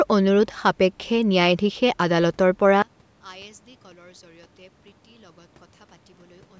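At 2.82 s the speech suddenly drops by about 28 dB. It stays faint until the end. The likely cause is one channel inverted. One side's polarity is flipped, so the shared centre content cancels in mono. Only the slight channel difference remains.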